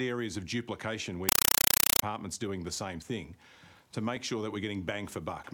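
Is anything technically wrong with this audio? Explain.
Yes. From 1.29 to 2.02 s there is very loud, chattering static: a compressed stream played as audio, with undecoded AC-3 data heard as 5.33 ms noise bursts repeating 31.25 times a second.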